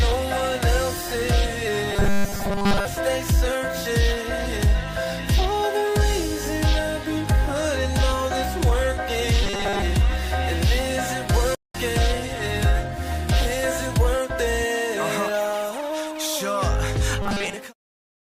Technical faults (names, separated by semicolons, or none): robotic sound from repeated short buffers; playback stall